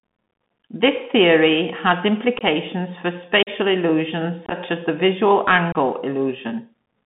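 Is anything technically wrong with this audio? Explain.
Yes, two things. The whole clip is going through a Bluetooth CVSD headset codec: the speech is squeezed into a phone-style band of roughly 150 Hz to 3.5 kHz, with a grainy hiss underneath and scratchy s sounds. CVSD sends a single up-or-down bit per sample and adapts its step size, so fast, bright sounds outrun it and smear. The damage is plainly audible and fits a 64 kbps headset link.

There's also unconcealed Bluetooth headset packet loss, four short dropouts where voice packets between headset and phone went missing and silence took their place, leaving abrupt holes. The first, at 2.38–2.42 s just after "theory has", loses about 22.5 ms in scattered bits. The second, at 3.43–3.49 s, loses about 41 ms, maybe ten packets' worth. The third, at 4.46–4.54 s just before "as the visual", loses about 37.5 ms scattered over about 52.5 ms. 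The fourth, at 5.72–5.76 s just after "as the visual", loses about 26 ms. Each one is a brief hole with abrupt edges in the speech.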